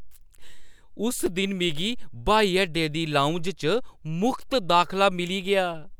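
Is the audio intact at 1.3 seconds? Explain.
No, a block of digital silence sits at 1.26 s: the output buffer was evidently not filled in time, so about 5 ms of the speech was replaced by zeros. The abrupt cut to silence and back, with no fade, is heard as a brief tick.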